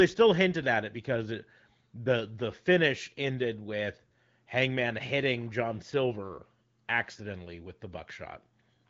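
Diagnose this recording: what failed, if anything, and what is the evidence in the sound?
Nothing failed in this recording, and the sound gives no evidence of a fault at any stage.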